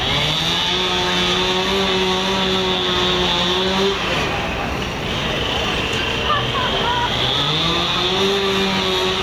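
Throughout the clip the level ducks by around 5 dB under each loud sound: gain pumping, likely from excessive input gain driving a fast limiter.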